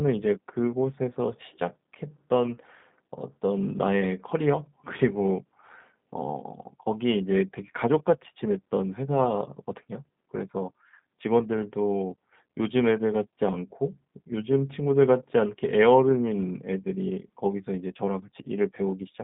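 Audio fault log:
Throughout, G.729 codec: the speech is confined to roughly 150 Hz to 3.7 kHz and sounds rough and synthetic, which points to an 8 kbit/s G.729A stream rather than simple band-limiting.
18.42 to 18.47 s, VoIP packet loss concealed by the speech codec: about 30 ms, fitting a single lost packet, is filled with a fading continuation of the preceding sound instead of silence or a click.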